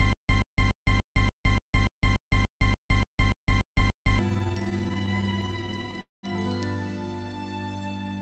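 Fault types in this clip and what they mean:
Stutter with silent gaps: From the very start to 4.19 s, a 129 ms burst repeats 14 times, each followed by 161 ms of dead silence, a steady 290 ms cycle. This is likely a stalled stream replaying its last fragment, so the intervening audio is lost.
Repeated stalls (stutter): Between 4.29 and 5.99 s the sound drags and catches in many tiny hitches, none longer than about 14 ms, with about a fifth of the span filled in. The jitter buffer kept running dry and was patched with continued sound, so nothing is lost.
Call audio freeze: From 6.01 to 6.25 s the sound halts for 222 ms, its last moment smeared briefly before fading into about 170 ms of silence, then resumes where it stopped. Likely delayed packets emptied the jitter buffer, inserting a pause without dropping audio.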